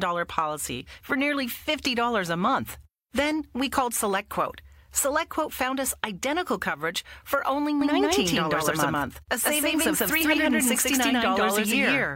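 From 7.81 s, right after "identical coverage for only", a doubled audio track appears: an equally loud copy trails by about 150 ms, likely from a second capture path, and stays to the end. Waveform and spectrogram show every onset repeated.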